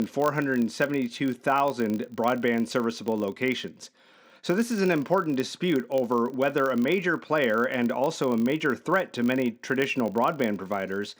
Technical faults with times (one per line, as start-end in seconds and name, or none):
0.00-11.19 filter restarted on every block